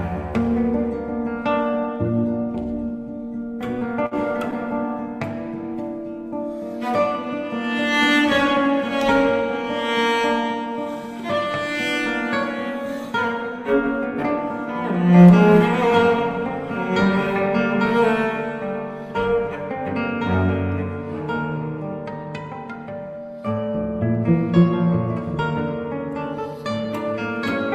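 The audio has two network timing faults close together. From 3.79 to 3.95 s there is a short stall from a late packet. The jitter buffer ran dry, so the receiver held the last sound for about 16 ms until the packet arrived and then resumed from the same point. Nothing is lost, but the sound is briefly stretched, adding about 8 ms overall. At 4.06 to 4.14 s a burst of packet loss follows. About 40 ms of audio is missing, and the receiver extended and faded the preceding sound over about 52 ms before playback jumped ahead, leaving that stretch missing.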